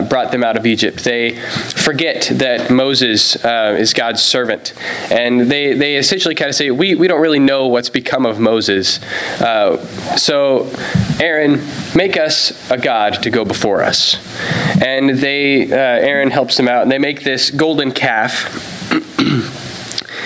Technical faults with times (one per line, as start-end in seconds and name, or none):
0.00-20.25 gain pumping